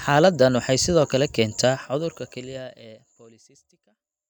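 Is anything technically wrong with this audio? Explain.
No, nothing technically wrong stood out on listening to this speech, and the gentle fade-out toward the end sounds like an ordinary deliberate edit.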